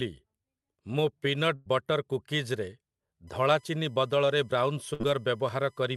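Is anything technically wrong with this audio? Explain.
Yes. There are two faults.

A burst of packet loss occurs at 1.55 to 1.68 s, and again at 4.94 to 5.02 s. Packets were lost or arrived late. The receiver held and faded the last sound. Speech then resumes with about 100 ms, then 60 ms, missing.

USB whine runs from 3.27 s to the end. The USB bus draws current in 1 ms frames. That current leaks in through power or ground. It sounds like a fixed-pitch tone on 1 kHz, strongest at 2 kHz, and it sits well below the speech.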